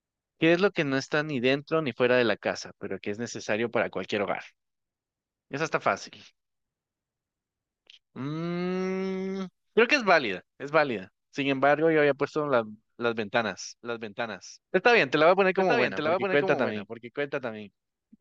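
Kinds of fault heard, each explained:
Doubled audio track: from 13.82 s to the end, the speech plays over itself, a full-band copy trailing about a second behind and roughly 5 dB quieter, dry and with no room tail, starting abruptly; likely a second, slower capture path mixed in alongside the original.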